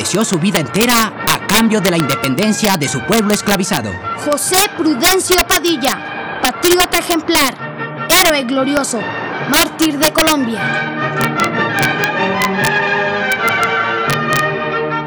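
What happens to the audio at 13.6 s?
At 13.6 s, as everywhere in the clip, integer overflow is present: the signal is driven about 6 dB past full scale, and roughly one sample in a hundred wraps to the opposite sign, giving sharp cracks. On the waveform, peaks jump abruptly to the opposite polarity; the spectrogram shows broadband vertical streaks.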